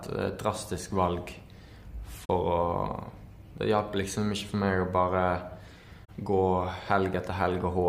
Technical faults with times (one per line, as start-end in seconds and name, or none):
2.24-2.29 AAC frame loss with muting
6.04-6.10 AAC frame loss with muting